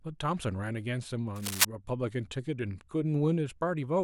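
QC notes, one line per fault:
1.35–1.65 s, cable scratch noise: a short patch of dense, ragged crackle sits over the speech, a few dB louder than it. It's likely a worn lead or connector being moved, its contact resistance jumping about and spitting noise into the signal.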